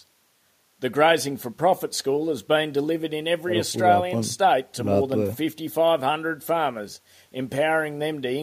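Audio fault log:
No audio faults were found in this speech clip.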